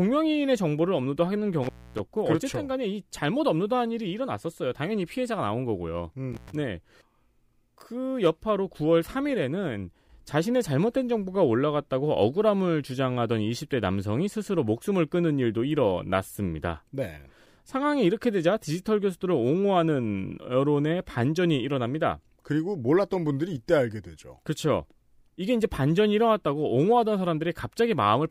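A speech recording in which the sound twice drops out abruptly, with a crackle as it cuts and again as it returns, leaving faint hiss in the gap: first from 1.63 to 1.99 s, with the signal gone for about 262 ms, then from 6.33 to 6.52 s, gone for about 110 ms. This is intermittent contact, where a loose cable or plug briefly breaks the connection, so the audio vanishes and scrapes back in as contact is restored.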